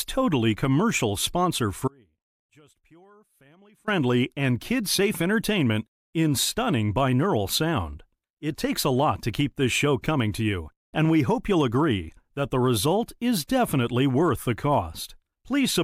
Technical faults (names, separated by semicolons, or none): audio dropout to a faint residue